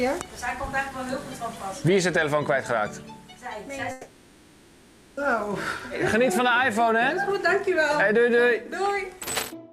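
From 3.91 to 5.20 s the audio drops out for about 1.26 s, likely a long network dropout. The receiver fills it with a decaying buzz or hiss instead of silence, and resumes later, skipping the lost section.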